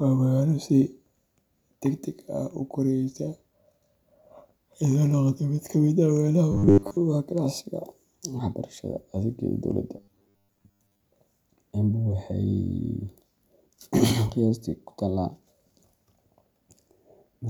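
From 6.52 to 6.98 s, and again from 9.97 to 11.01 s, the speech collapses into a rigid, metallic buzz pitched at 100 Hz that only loosely tracks the words. This is robotic sound from repeated short buffers: new audio is likely arriving too seldom, so the playback keeps looping the last fragment, about 10 ms long to match the 100 Hz pitch, while most of the real audio in those stretches is skipped.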